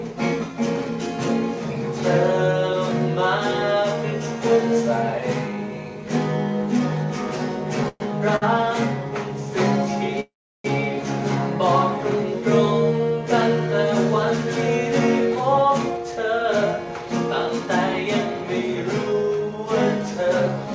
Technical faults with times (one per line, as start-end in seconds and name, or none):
7.88-8.02 call audio freeze
8.36-8.59 short stall from a late packet
10.20-10.66 call audio freeze
15.35-17.07 jitter buffer speed-up
17.59-19.14 jitter buffer speed-up